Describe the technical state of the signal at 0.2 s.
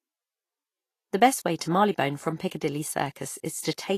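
At 0.2 s, as throughout, nothing sounds above 14.2 kHz and coarsely quantised treble turns into grainy hiss, likely Vorbis compression. A plain low-pass would only dull the sound, not roughen it.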